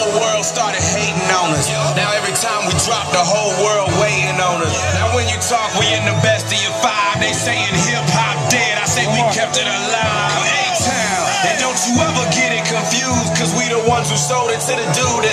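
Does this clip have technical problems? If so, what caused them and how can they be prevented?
No, there's nothing technically wrong to point to here, so there's no cause to track down and nothing that needs preventing.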